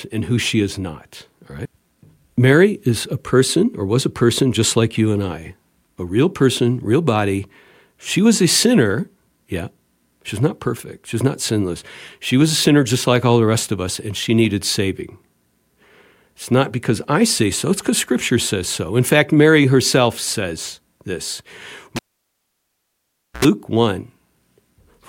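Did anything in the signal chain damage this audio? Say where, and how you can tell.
Yes, a cable pulled and plugged in on the analogue wiring, just after "herself says this", at 21.96 to 23.45 s. A pop, about 1.4 s of near silence, an 80 ms burst of 60 Hz mains buzz as the tip touches, then another pop. The buzz and pops rule out a digital dropout.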